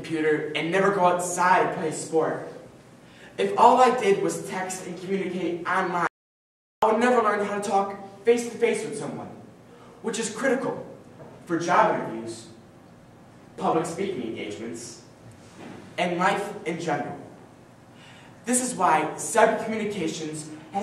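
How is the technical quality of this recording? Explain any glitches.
The recording has one clear glitch, an audio dropout to silence from 6.07 to 6.82 s. The sound cuts off abruptly and returns about 0.75 s later with no room tone between, likely because the input was briefly lost while recording continued. The waveform shows a flat, near-silent line; the spectrogram shows an empty vertical band across every frequency.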